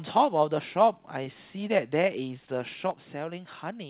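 A speech recording carried over a narrowband call path, with nothing above 4 kHz, which fits G.711 mu-law coding. Between 1.24 and 1.35 s there is a short stall from a late packet. A packet missed its playout time, the jitter buffer ran dry, and the receiver held the last sound until the data turned up, then carried on from the same point. Nothing is lost, but about 16 ms of extra held sound makes that moment drag slightly. From 2.91 s to the end, the level drops abruptly by about 6 dB and stays down. That step is what you hear when one channel drops out of a stereo pair: the mono sum keeps only half of the shared material, and anything present only in the missing side vanishes. A lost stereo channel is the likely cause here.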